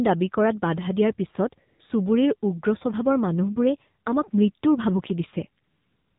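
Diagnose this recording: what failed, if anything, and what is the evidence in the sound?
Codec stage, AMR narrowband mobile codec: nothing reaches above 4 kHz anywhere in the speech, and the voice carries a plainly audible buzzy, synthetic edge. The vocal-tract model is fed too few pulses per 20 ms frame, consistent with a low AMR-NB mode around 7.4 kbps.

Call processing, AMR comfort noise: at 1.68–1.80 s (120 ms) and again from 5.64 s to the end (about 0.55 s), right after "মানুহবোৰে আমাক মৃত্যুৰ ভাবুকি", the real background drops out and is replaced by a smooth, steady synthetic hiss. Voice activity detection judged the talker silent and stopped sending speech frames.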